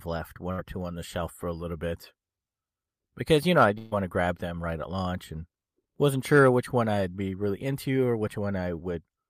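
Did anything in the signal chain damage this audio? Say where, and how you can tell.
Yes, a burst of packet loss at 0.51 to 0.60 s and again at 3.78 to 3.93 s, introduced at the network stage. In each gap the receiver kept repeating the last sound and faded it down: about 64 ms before "two on the shelf", then about 134 ms between "because you know I" and "to grab them right". The buzz or hiss that lingers and dies, followed by a jump, shows roughly 60 ms and 140 ms of audio never arrived.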